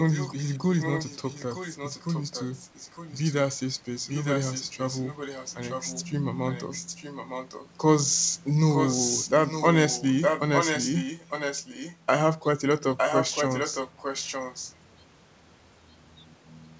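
Echo leak runs from 0.0 to 3.33, 4.06 to 6.03, 6.49 to 7.74, 8.72 to 11.97 and 12.97 to 14.75 s. A copy of the speech trails 910 ms behind, growing from faint to strong, likely from a loudspeaker echo the canceller missed.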